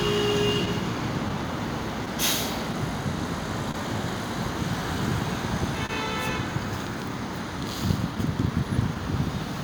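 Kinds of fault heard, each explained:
Clock drift between sender and receiver: The sending device's clock runs slow, by roughly one and a half percent, so the receiver's jitter buffer keeps draining and must repeat or stretch short pieces to keep up. Small timing hiccups recur unevenly through the everyday sounds.
Scattered short gaps: Between 0.65 and 3.76 s, about five packets arrived late or went missing, each patched by continuing the previous sound. The longest gap is around 30 ms, roughly 70 ms in all, heard as brief ticks and smears.
Short stall from a late packet: At 5.86 to 5.91 s one packet was not ready when due, so the buffer ran dry and the receiver held the last sound for 29 ms until it arrived. Nothing is lost, but that moment drags with a slight dip.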